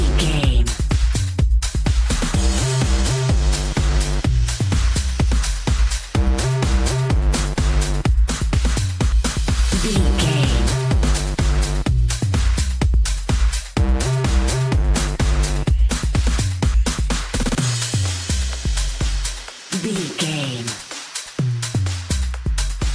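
No faults are audible anywhere in the recording.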